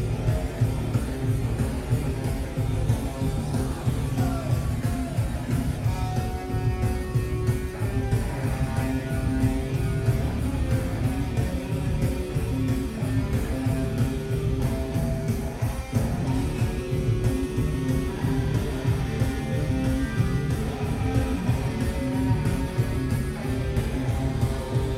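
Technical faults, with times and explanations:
No technical faults can be heard anywhere in the clip.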